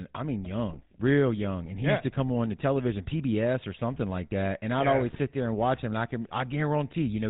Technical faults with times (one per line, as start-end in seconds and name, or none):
0.00-7.29 GSM full-rate codec